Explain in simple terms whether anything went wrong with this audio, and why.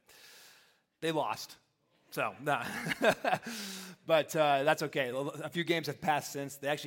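Nothing went wrong with this audio.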